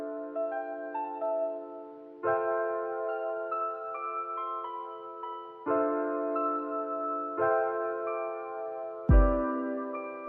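No technical fault can be heard anywhere in the signal, which stays continuous throughout.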